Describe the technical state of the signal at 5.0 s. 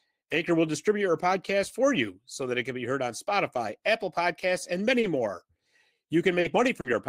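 At 5.00 s the speech hits a short stall from a late packet, running to about 5.06 s. A packet arrived late, the jitter buffer ran dry, and the receiver stretched the last sound for about 30 ms before resuming exactly where it stopped. Nothing is lost, but playback ends up about 30 ms later. It sounds like a briefly held syllable with a faint buzz or dip. On a spectrogram the harmonics run flat and unchanging across that span, and the waveform shows a repeated cycle.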